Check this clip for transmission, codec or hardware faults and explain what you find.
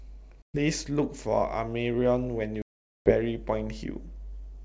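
Two dropouts from packet loss on an ADPCM call, at 0.42 to 0.58 s and 2.62 to 3.13 s. Packets failed to arrive and were replaced by silence, about 120 ms in the first gap (a handful of packets) and 440 ms in the second (around twenty). The receiver's adaptive predictor and step size then no longer matched the sender's, so each hard-edged hole is followed by speech returning with slight, brief distortion before it settles. The wideband G.722 coding carrying the call sounds consistent with its full 64 kbit/s mode.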